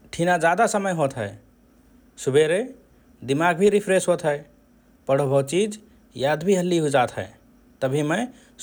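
No technical faults are audible.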